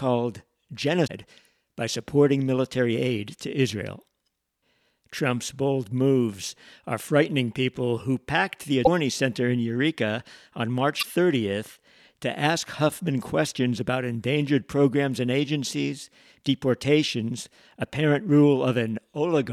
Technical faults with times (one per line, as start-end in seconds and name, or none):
1.03-1.10 damaged data in a compressed stream
8.84-8.88 damaged data in a compressed stream
10.99-11.06 damaged data in a compressed stream